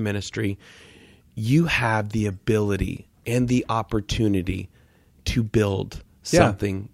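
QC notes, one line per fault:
No faults heard on the speech track; nothing to log.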